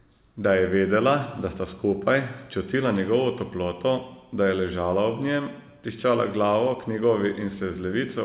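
No faults can be heard anywhere in this speech.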